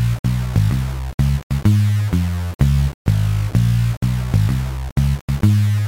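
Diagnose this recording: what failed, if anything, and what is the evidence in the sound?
Low bit depth without dither runs through the whole recording, most likely from a sample-format conversion that rounded to about 5 bits. The grainy distortion sits roughly 20 dB below the sound and changes with it, quiet sounds turning gritty, unlike steady hiss from dither or a noisy preamp.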